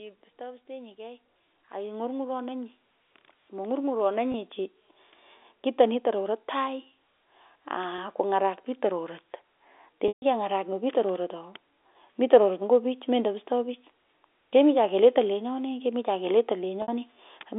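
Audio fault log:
0.38 to 4.57 s, automatic gain rising: the speech and the background noise beneath it swell together over about four seconds, ending roughly 15 dB louder than they began. The gain control judged the incoming level too quiet and turned itself up gradually, so the voice and the room noise rise together instead of the voice simply getting louder.
4.32 to 4.34 s, 7.96 to 7.98 s, 10.08 to 10.22 s and 16.82 to 16.88 s, packet loss with pitch repetition: the two 20 ms gaps sound like a brief held, buzzy note. The 60 ms gap at 16.82 s and the 140 ms gap at 10.08 s stretch the note and let it fade toward silence before the speech cross-fades back in. The receiver filled each missing stretch by repeating the last pitch period and fading it out over about 50 ms. The lengths fit one, three and seven lost 20 ms packets, all heard through a 300 Hz to 3.6 kHz telephone band from G.711 coding.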